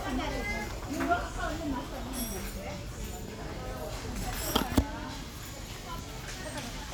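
Everyday sounds, with no technical fault audible anywhere in the clip.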